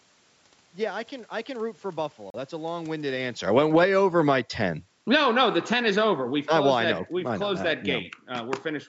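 At 2.30 s the speech drops out to a brief gap of about 39 ms before resuming at 2.35 s. This is a Bluetooth stall, likely caused by interference delaying packets until the headphones' buffer emptied and playback briefly paused.

From 2.92 s to 3.94 s the level sinks by about 15 dB, with the room noise falling along with the speech. This is automatic gain falling: the gain control judged the input too loud and pulled its gain down gradually. The talker also shifts position around 3 s. The same slow fall returns from 4.98 s to 6.71 s, about 9 dB this time.

Overlapping those dips, speech and background swell together from 3.86 s to 4.69 s by about 9 dB, from 5.29 s to 5.97 s by about 5 dB, and from 6.62 s to 7.08 s by about 3 dB. This is automatic gain rising, as the control found the input too quiet and raised its gain step by step. The competing corrections make the level pump up and down through the middle of the clip. 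The call processing's band limit, with nothing above 8 kHz, is also present.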